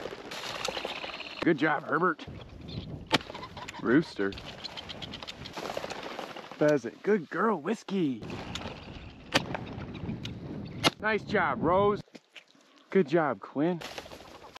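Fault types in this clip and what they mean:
Frames out of order: two neighbouring runs of coded frames were decoded in swapped order, so a short stretch plays with its halves exchanged and no time is lost. This happens at 0.51–0.65 s and 8.79–8.94 s, with swapped blocks of about 93 ms and 70 ms, heard as a brief garbled flutter. A waveform shows abrupt envelope jumps at each join. A spectrogram shows the spectral pattern breaking and resuming out of sequence there.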